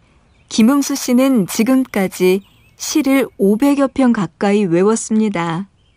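Imaging from sample-and-hold upsampling affects this speech clip from 0.60 s to 3.70 s. The rate was raised by holding each sample value instead of interpolating, which fits a jump from about 22 kHz to 44.1 kHz. Because no smoothing filter followed, mirrored copies of the spectrum appear, the first occupying roughly 11.0 kHz to 22.1 kHz at about 22 dB below the signal. They are heard as a bright metallic fizz that rises and falls with the speech.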